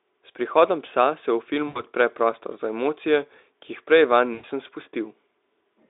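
A speech clip carried over a Speex line band of 300 Hz to 3.7 kHz, with VoIP packet loss concealed by the speech codec at 1.67–1.82 s (after "prihodom psa se v", before "odpre prostor") and 4.33–4.45 s, roughly 80 and 100 ms lost. The decoder stretches the last pitch and filter into a fading buzzy tone or coloured noise, which shows as a decaying envelope.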